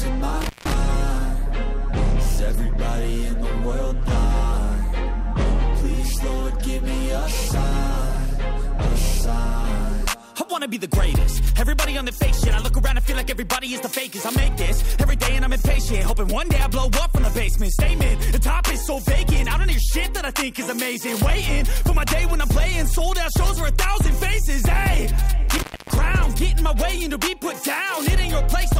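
The audio drops out twice with a crackle at each edge, once from 0.41 to 0.74 s with a gap of about 167 ms and again from 25.49 to 25.98 s with a gap of about 278 ms. This is intermittent contact: a loose cable or plug briefly breaking the signal path.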